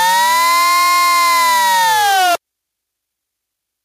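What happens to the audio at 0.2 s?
At 0.2 s the audio is caught in gain pumping, which runs through the whole clip. The gain swings by roughly 5 dB, pulled down under each loud sound, so loud and soft parts sit closer in level and the sound is squashed. Likely cause: gain set far too high, with a fast limiter pulling it back down.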